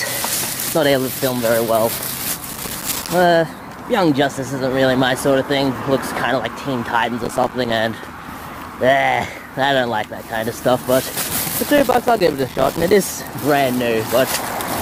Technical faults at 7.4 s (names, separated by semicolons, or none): processor overload crackle